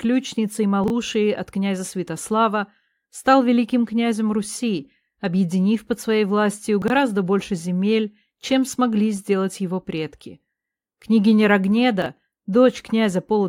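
At 0.84 to 0.90 s, 6.82 to 6.90 s and 12.02 to 12.06 s, chunks play out of order. Each time, one 20 ms piece of audio arrives late and plays after the pieces that should follow it. It is two chunks late first, then three, then one. Nothing goes missing. The order is scrambled, and each disturbance has three hard joins. Each sounds like a brief jumbled moment.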